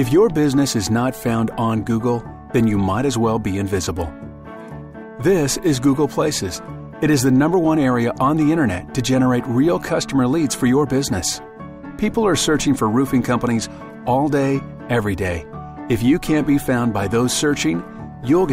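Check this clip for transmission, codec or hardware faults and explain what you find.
Nothing in the recording points to a transmission, codec or hardware problem. There is no dropout, distortion or glitch anywhere to report.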